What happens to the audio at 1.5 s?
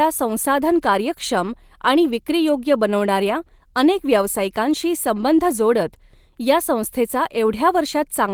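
Nothing goes wrong at 1.5 s: the speech carries on intact through that moment, with the Opus voice compression working as it should.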